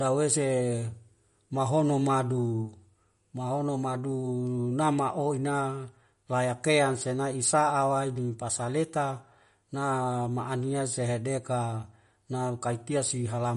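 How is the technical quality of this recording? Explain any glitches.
The recording has audible compression damage across the whole clip. MP3 compression artefacts run throughout: nothing sounds above 11.1 kHz, so the treble is cut off abruptly, and the remaining sound has a plainly audible watery, swirling quality. That points to a low bitrate, something around 47 kbps. The likely cause is an encoder short of bits dropping high frequencies and zeroing weaker spectral detail, which then flickers in and out from frame to frame.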